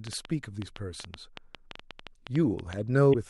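From 0.07 to 2.74 s, a train of clicks ticks through the speech, about twenty at roughly 7 per second, irregularly spaced. Peaks sit about 10 dB above the signal. Nearby equipment interference is a likely source. At 3.10 to 3.15 s, damaged data in the compressed stream makes the decoder lose sync. A short glitch results.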